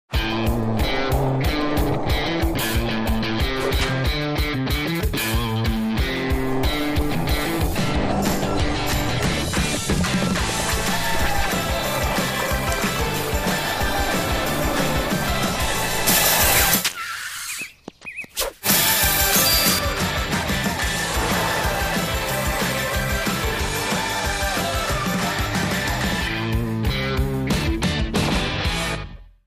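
From 16.07 to 19.79 s, pre-emphasis is left on: the treble boost applied for transmission, here following the FM 75 µs curve, never gets its matching de-emphasis. Highs rise by about 13 dB at 10 kHz relative to 1 kHz, so the section turns thin, bright and hissy-sibilant. Unlike a simple treble shelf, the lift keeps climbing with frequency above roughly 2 kHz. Unlike bass loss, the low end is intact while the top is exaggerated.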